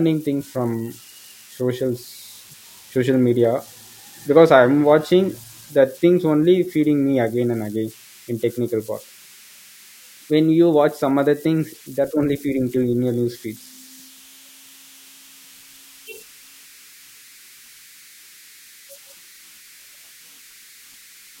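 Converter idle tones run through the whole speech clip at about 28 dB below the signal. They sound like a whistle around 2 kHz in the pauses and a grainy texture under quiet passages. An undithered delta-sigma converter falls into repeating bit patterns when its input is small. Unlike mains hum, the tone is high and set by the converter's offset.

At 3.45 s a single sharp click appears as a thin vertical line across the spectrum. The likely cause is dropped samples: a fraction of a millisecond went missing, so the waveform jumps straight to a later value. No sound is audibly removed, which separates it from a dropout.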